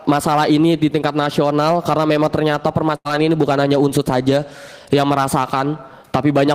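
At 2.95 to 3.07 s a burst of packet loss leaves about 100 ms of audio missing. The receiver carries the last sound forward and turns it down over roughly 94 ms, giving a held buzz or fading hiss before the sound resumes further on. A spectrogram shows smeared, repeating bands that dim, and the waveform shows a tapering envelope with an abrupt restart.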